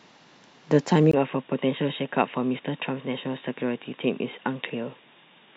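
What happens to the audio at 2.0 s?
The input likely switched to a poorer device at 1.11 s, after a brief gap. At 2.0 s, the speech sounds dull and boxy, with nothing above 3.8 kHz, and is slightly quieter.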